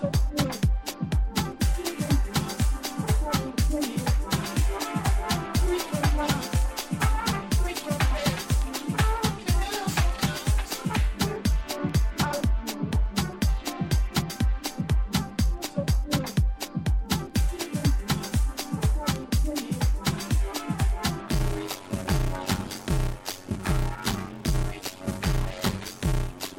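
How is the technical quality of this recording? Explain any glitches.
The recording holds up until 21.27 s. From there to the end it shows a block size mismatch (padded). One stage delivers blocks shorter than the next stage reads, so each block's remainder is zero-filled. The resulting gaps repeat at 93.8 Hz, which fits a 512-sample read block, producing a steady buzz while the audio runs at 0.625 of normal speed. The pitch stays about normal, which separates this from a sample-rate mismatch, and the regular buzz separates it from random dropouts.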